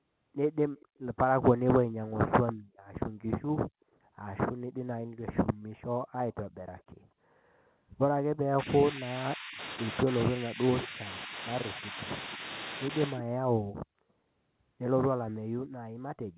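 At 0.78 to 0.99 s and again at 6.78 to 6.83 s there is echo leak: a faint delayed copy of the speech, about 35 and 40 dB below it, trailing by roughly 240 and 230 ms. The likely cause is a far-end loudspeaker echo that the echo canceller failed to remove. What sets it apart is that sound is added rather than lost.

From 8.63 to 9.59 s and 10.3 to 11.35 s, the speech is suppressed in double talk. The level dips by up to about 20 and 25 dB, over roughly 0.7 and 0.5 s. This is likely the canceller ducking the talker while both sides speak.

At 10.82 to 10.87 s, inside that second dip, echo leaks again. It arrives 210 ms late and is much louder, at about 15 dB below the speech.

Lighter suppression follows at 11.74 to 11.97 s and 12.37 to 12.42 s, each a drop of about 5 dB. Unlike echo leak, these remove the talker's own sound instead of adding a copy.

Throughout, the G.711 mu-law call path limits the audio to 4 kHz.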